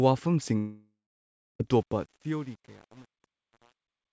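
From 0.58 to 1.61 s the speech stops and a fading buzz stands in for it, sinking to near-silence. This is likely a long network dropout: about a second of audio is lost, not just briefly concealed. From 1.77 s, as the speech fades out, truncation distortion on the fade turns the quiet tail gritty, worst from 1.90 s onward. This fits a volume stage working at about 8 bits without dither, unlike a clean editorial fade.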